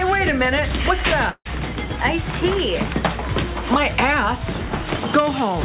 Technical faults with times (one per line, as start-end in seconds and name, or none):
1.30-1.47 long network dropout